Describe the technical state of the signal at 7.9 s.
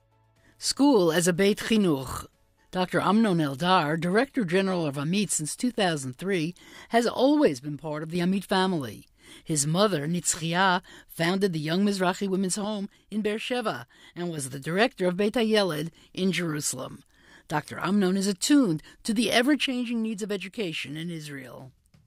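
At 7.9 s you're inside a brief dropout, from 7.48 to 8.15 s, where one channel drops out, likely from a lost stereo side. Summed to mono, the shared content sinks by about 6 dB all at once, and anything living only in that missing channel vanishes until it returns.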